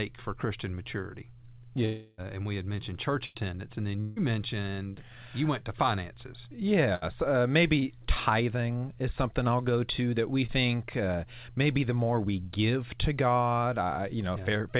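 From 1.85 to 2.21 s and 4.01 to 4.21 s, a likely long network dropout leaves about 0.33 s and 0.15 s of speech gone, bridged by a fading continuation of the last sound rather than silence. It runs longer than a packet-loss burst. At 3.26 to 3.38 s and 6.95 to 7.12 s, a burst of packet loss loses 90 ms and 60 ms, each covered by a brief held buzz or hiss that fades before the speech resumes further on. At 7.79 to 7.85 s and 10.46 to 10.51 s, short concealed packet loss drops about 30 ms each time, heard only as a quick smear or wobble. Throughout, the call path leaves nothing above 4 kHz, which fits a G.711 narrowband codec.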